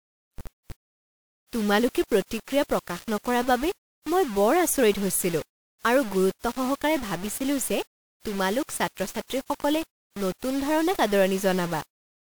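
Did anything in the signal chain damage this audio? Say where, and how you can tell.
Yes. The damage likely happened at a sample-format conversion, where the speech was rounded to a very short word length without dither. The grain sits only about 15 dB below the speech, which fits a 5-bit word. Because the rounding error tracks the waveform instead of being randomised, it is heard throughout as grainy distortion that rides on the speech and follows its shape, not as an independent, steady noise floor.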